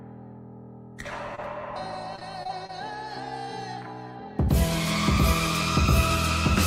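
At 1.35 to 1.40 s, a short concealed packet loss: about 20 ms never arrived and was bridged by extending the preceding sound, leaving a brief smear. From 2.16 to 2.71 s, repeated packet loss gives a choppy, robotic stretch: five short dropouts, the longest 21 ms, each patched by continuation, with about 16 percent of the span synthesised.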